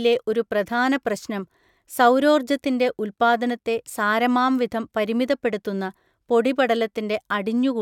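No technical faults can be heard anywhere in this speech recording. There is nothing to place on the timeline.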